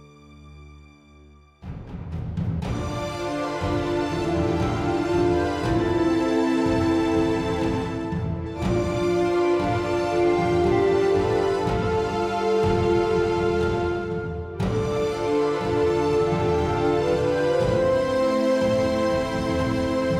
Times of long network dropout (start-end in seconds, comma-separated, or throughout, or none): none